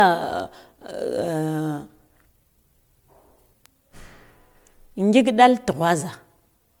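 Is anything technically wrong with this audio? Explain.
Yes. The speech has generation loss throughout. It sounds swirly, smeared and hollow, and attacks blur. The likely cause is about ten passes of MP3 encoding near 128 kbit/s. Each pass requantises on a shifted frame grid, so noise and spectral holes build up.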